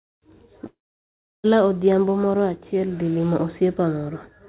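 Speech carried over a narrowband call path, with nothing above 4 kHz, consistent with G.711. At 0.66 s the sound decays into a short fading buzz or hiss, then goes silent for 0.7 s. It resumes at 1.46 s with 0.78 s of content missing, likely a long network dropout.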